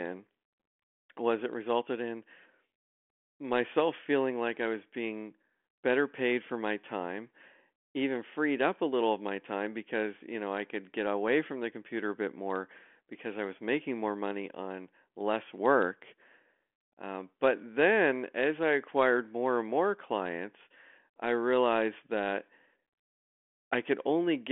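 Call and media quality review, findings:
No findings in this call and media quality review; the G.726 path at 40 kbit/s, band-limited below 3.8 kHz, shows no faults.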